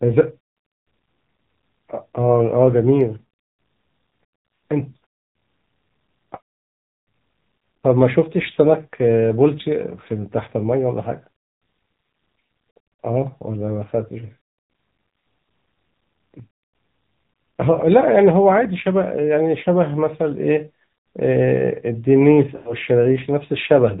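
Throughout the clip the speech carries the sound of the AMR narrowband mobile codec at a low mode, which fits the 7.4 kbps rate. The signal is band-limited at 4 kHz, so sibilants and breath lose their top end. At this bitrate the vocal tract model gets only a few pulses per subframe to work with, and the damage is plainly audible as a buzzy, synthetic edge on every voiced stretch.

At 5.03 s there are lost AMR speech frames, consistent with about two frames, roughly 40 ms of audio. The decoder covers the gap by repeating the last good pitch and spectral settings at reduced gain, which gives a brief dip and warble. At 22.56 to 22.74 s a longer run, about 100 ms of missing frames, is concealed the same way. The sound smears out and fades toward silence, then returns weak and rough for a moment.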